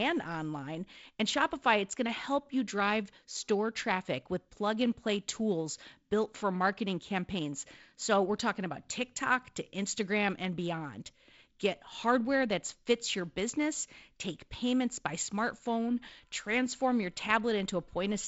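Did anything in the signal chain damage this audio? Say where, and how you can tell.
No, nothing in the chain has damaged this speech; what you hear is the ordinary sound of G.722 wideband telephone coding, with the top end stopping around 7.7 kHz and a light, grainy texture from the coder.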